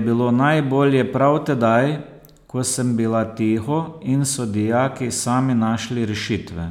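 Speech clip, no audible faults.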